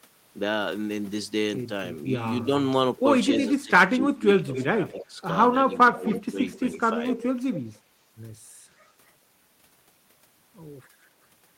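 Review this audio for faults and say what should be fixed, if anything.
Speech suppressed in double talk occurs at 3.38 to 4.46 s, 4.77 to 5.19 s and 5.68 to 7.02 s. The speech dips in pieces, by up to about 20 dB at first, then about 15 and 10 dB. This likely happens because the echo canceller treats overlapping talk as echo and turns it down. A canceller with better double-talk detection would prevent it.

Echo leak appears at 3.45 to 3.50 s, 4.54 to 5.05 s, 6.07 to 6.59 s and 7.13 to 7.76 s. A faint copy of the speech returns 253 to 256 ms later, about 15 to 20 dB below it. This is likely loudspeaker sound that the far end's echo canceller failed to remove. A headset or a better-converged canceller would prevent it.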